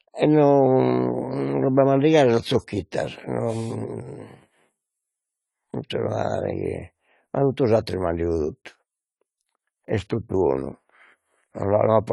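Throughout, the speech stops at 11.5 kHz and warbles audibly, likely AAC compression at a low bitrate; a low-pass filter alone would dull without that swirl.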